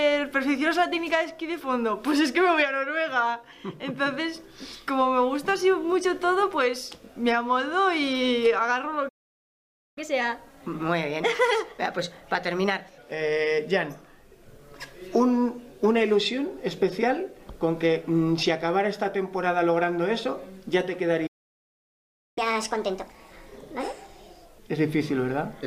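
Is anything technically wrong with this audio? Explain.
Yes. There are two playback stalls, each followed by catch-up at higher speed.

The first playback stall runs from 9.08 to 9.98 s, cutting the sound off for about 0.88 s. The second runs from 21.26 to 22.38 s, a gap of about 1.1 s. Both times the output drops to silence mid-flow, most likely because the player's buffer ran dry or its playback thread was held up, and then resumes once data arrives again.

After each stall comes catch-up at higher speed: the player resamples its backlog faster to recover lost time, raising tempo and pitch together. From 9.98 to 12.98 s it runs at 1.15 times normal speed, about two semitones sharp, a mild but audible lift. From 22.38 to 24.58 s it runs at 1.5 times speed, roughly seven semitones up, which sounds clearly hurried and chipmunk-like before returning to normal.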